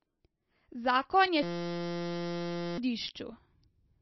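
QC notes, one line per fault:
throughout: MP3 compression. Nothing is left above about 5.8 kHz, so the audio sounds dull and muffled, and the coding damage is plainly audible as watery, swirling texture and smeared onsets, which fits a very low bitrate around 26 kbps, likely from heavy MP3 encoding.
1.43–2.78 s: system hang loop. A single 5.8 ms slice of audio repeats back to back about 233 times, producing a steady buzz at 172 Hz in place of the speech, which fits a 256-sample buffer cycling while the system froze; roughly 1.5 s of audio is lost.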